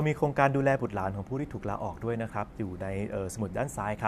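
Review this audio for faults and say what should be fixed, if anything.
No faults detected; nothing to fix.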